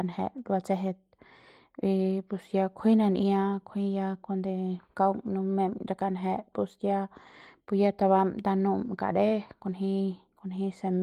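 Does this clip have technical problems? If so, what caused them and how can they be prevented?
No, this clip has no technical problems, so there is nothing to prevent.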